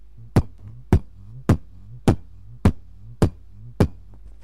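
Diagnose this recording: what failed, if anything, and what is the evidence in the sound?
Nothing here points to a failure at any stage, so there's no evidence of a fault to diagnose.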